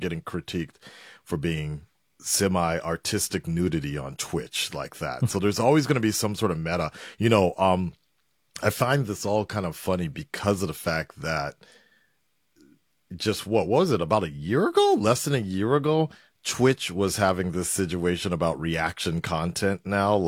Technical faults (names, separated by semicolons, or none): none